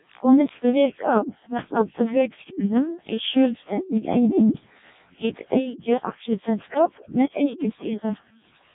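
Speech that sounds robotic and buzzy throughout, with nothing above 3.8 kHz and heavy damage consistent with the Codec 2 vocoder at its lowest rate, near 0.7 kbit/s. The waveform is discarded; only pitch, voicing, energy and a coarse spectral envelope survive, rebuilt from sine waves.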